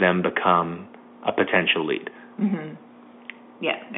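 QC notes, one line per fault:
The speech sits within a telephone band of roughly 200 Hz to 3.5 kHz, consistent with standard G.711 telephone coding at 64 kbps, with nothing beyond what that format normally imposes.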